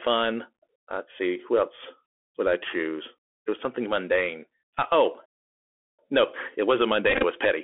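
Bluetooth CVSD headset codec, throughout: the one-bit 64 kbps delta coding confines the speech to roughly 250 Hz to 3.4 kHz, with scratchy sibilants and a granular hiss underneath.

Playback stall, 5.26 to 5.99 s: the sound cuts out completely for about 0.73 s, likely because the player starved of data, then resumes with "no it wasn't".

Bluetooth headset packet repeated, 7.10 to 7.24 s, right after "oh no it wasn't": about 79 ms of audio is lost in short scattered runs, roughly 15 ms at most. The re-decoded packets give brief buzzy flickers.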